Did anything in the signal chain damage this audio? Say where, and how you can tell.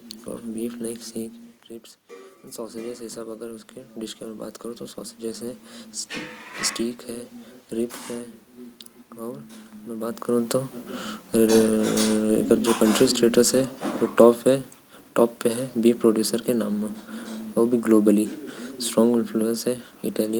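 Yes. In call processing, automatic gain rising lifts the level about 10 dB from 2.55 to 5.69 s after the input drops about 12 dB. The waveform envelope and the spectrogram's room-noise floor swell together.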